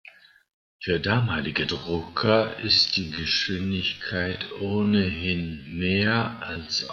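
Software likely stretched the audio from 1.71 s to the end of the clip to fill a longer duration, repeating short pieces so the pitch held. The result is a time-stretched section: the speech abruptly slows to about half pace (0.51×), sounding dragged.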